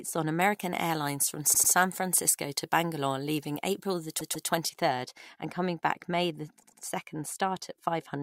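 From 0.41 to 4.69 s, ending just before "third and coming back", pre-emphasis left on boosts the treble by about 13 dB at 10 kHz, a rise that fits the 75 µs FM curve, with no matching de-emphasis. The sound is thin and hissy with harsh sibilance. Unlike a simple treble EQ, the boost climbs steadily with frequency.

Repeated frames occur at 1.53 to 1.72 s, at 4.19 to 4.48 s just before "third and coming back", and at 6.61 to 6.81 s. In each, a short block of about 96, 144 and 96 ms respectively is played twice more, heard as a stutter. Unlike a dropout, nothing is lost, and the audio runs about 192, 288 and 192 ms longer.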